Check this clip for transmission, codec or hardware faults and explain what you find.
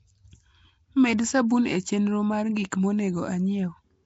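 Across the whole speech clip, a rough, hissy halo clings to the voice, which sounds smeared and underwater, with nothing above 7.7 kHz. The likely cause is Nellymoser compression, whose fixed bit budget starves weak bands and refills them with noise. The damage fits roughly 32 kbps.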